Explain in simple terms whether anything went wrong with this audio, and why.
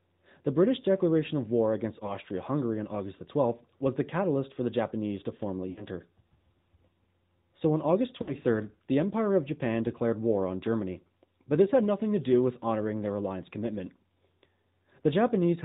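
The whole speech clip went through the AMR narrowband mobile codec, the phone-network voice coder. It drops everything above 4 kHz and rebuilds the voice from a simplified model, so it sounds muffled, thin and plainly buzzy or synthetic throughout.

There are also three spots with lost AMR speech frames, where pieces of the signal were corrupted by radio errors and the decoder filled the gap by stretching the last good sound while fading it. At 2.06 to 2.14 s a short dip of about 20 ms is heard. At 5.70 to 5.84 s and 8.22 to 8.34 s the gaps are longer, about 60 ms each, where the sound smears and fades before recovering. That fits about three missing 20 ms frames each time.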